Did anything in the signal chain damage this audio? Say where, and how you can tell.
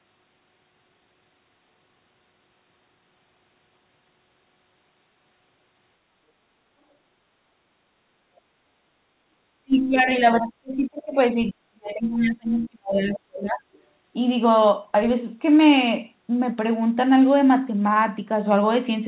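Yes, at the call-processing stage. The speech drops sharply, by roughly 35 dB at its deepest, from 9.56 to 10.1 s and again from 10.35 to 13.63 s. This is likely speech suppressed in double talk: the echo canceller, facing both sides at once, turned the talker down along with the echo.

Inside that second dip, from 12.56 to 12.68 s, a brief scrap of the other side's voice leaking through is audible, around 25 dB below the talker. The same echo canceller likely failed to fully subtract the loudspeaker signal from the microphone during that moment.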